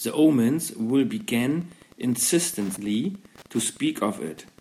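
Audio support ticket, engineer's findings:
Wi-Fi interference, 0.87 s to 4.6 s. Faint steady ticking under the speech, 102.4 ms apart. A nearby Wi-Fi radio's beacon is being rectified by the audio circuitry.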